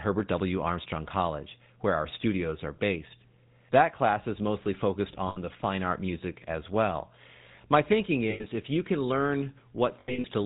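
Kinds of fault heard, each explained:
GSM full-rate codec: throughout, the speech has a buzzy, gravelly roughness with nothing above 4 kHz. The codec models the vocal tract and drives it with evenly spaced pulses, keeping one excitation sample in three. The damage is plainly audible and fits a 13 kbps full-rate coder.
lost GSM frames: at 5.28–5.38 s (after "class is mostly focused"), 8.30–8.45 s (after "my thinking") and scattered across 10.00–10.26 s, the decoder repeats the last good frame. This produces short, rough, metallic rings, with the longest run about a tenth of a second.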